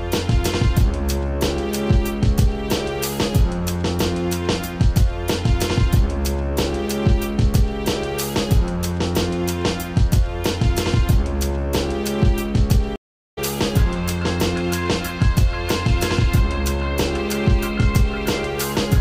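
At 12.96 s a stream reconnect interrupts the audio. The connection dropped, so the player fell silent for 411 ms, then re-established the link and started a new decoder partway into the stream. Because the decoder begins cold, the sound fades back in rather than resuming at full level. By 13.39 s playback has returned, but at a later point in the stream, roughly 0.3 s ahead, so that stretch of audio is skipped.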